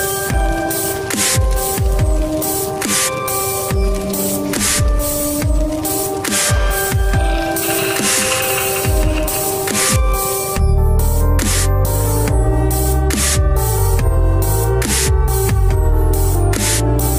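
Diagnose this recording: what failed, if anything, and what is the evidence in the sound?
A doubled audio track appears from 7.68 to 9.96 s: a full-band copy of the sound trails by around 200 ms, a few dB below the original, with no decay or room colour, starting and stopping abruptly. The likely cause is a second, slower capture path or an edit holding two offset copies.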